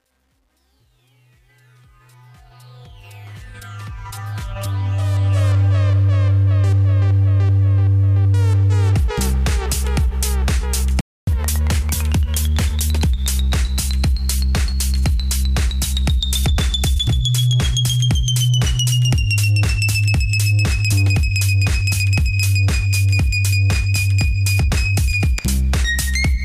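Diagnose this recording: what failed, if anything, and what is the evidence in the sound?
Truncation distortion on a fade sits in the sample-format conversion or digital gain stage. From 0.0 to 5.44 s the fade is rendered with only about 10 bits and no dither, worst from 0.0 to 2.97 s, where the low level leaves the waveform as a few square steps. The sound there is gritty and granular. A spectrogram shows broadband distortion tracking the signal instead of a smooth noise floor, and a zoomed waveform shows visible staircasing.

A playback stall appears at 11.01 s, where the sound stops dead for 268 ms and resumes at 11.27 s. The likely cause is a buffer underrun or a blocked audio thread in the driver or playback path, which would starve the output. On the waveform it is a flat gap cutting through mid-flow material. On a spectrogram it is a vertical blank band, with abrupt edges on both sides rather than a decay.

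Catch-up at higher speed follows immediately, from 11.27 to 13.06 s. The player resamples its backlog at 1.15 times normal speed, so both tempo and pitch rise by roughly two semitones before dropping back. This is playback-stage behaviour that wins back the time lost in the stall. A spectrogram shows harmonics shifted upward and compressed in time over that stretch, and the waveform's features are visibly tighter.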